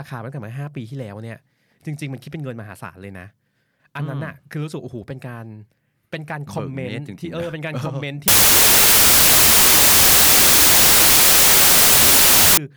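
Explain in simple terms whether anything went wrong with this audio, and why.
From 8.28 to 12.57 s the speech sinks into loud hiss, slowed to half speed and deeper. This is a wrong sample width fault, consistent with 32-bit audio being read as 16-bit.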